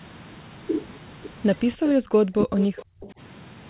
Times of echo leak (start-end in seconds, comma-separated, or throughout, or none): 1.86-1.90, 2.59-2.84